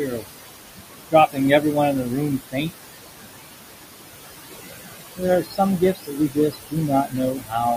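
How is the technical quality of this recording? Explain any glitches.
The recording is held back by heavy noise processing. A suppressor runs on the speech throughout, and in three stretches it eats into the speech itself. The room noise beneath it, about 8 dB below the speech, is genuine background.

Noise suppressor artifacts run through the whole clip. The suppressor pulls about 19 dB out of bands it judges to be steady noise, frame by frame. The background therefore drops away in pauses and swells back under speech. Unlike plain room noise, it pumps with the speech.

Speech cut by the noise suppressor happens from 0.05 to 0.27 s, 1.1 to 2.87 s and 5.16 to 7.55 s. Parts of the speech were mistaken for noise and pulled down by up to about 16, 22 and 20 dB. Roughly a fifth of a second, under a second and about a second in total sound swallowed or faint. These dips follow the speech's soft parts, not the gaps between words.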